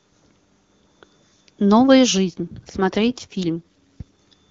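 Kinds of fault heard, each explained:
AMR rate drop: From 2.28 s to 4.03 s the speech turns rougher and more synthetic, with no gap and no narrowing of the band. This fits the AMR-WB link switching from 23.85 to 8.85 kbit/s, trading coding detail for error protection.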